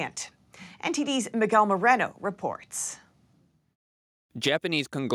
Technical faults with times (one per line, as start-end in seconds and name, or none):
none